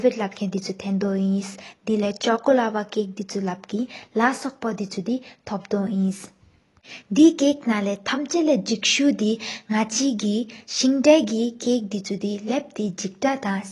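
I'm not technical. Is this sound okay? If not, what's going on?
No. AAC compression runs through the whole clip: the speech sounds dull and smeared, with nothing above 11.5 kHz. This is likely from saving it in a heavily squeezed format that discards high, fine detail to make the file smaller.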